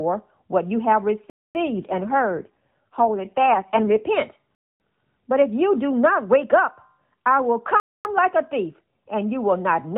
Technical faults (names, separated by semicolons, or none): AMR rate drop; gap between chunks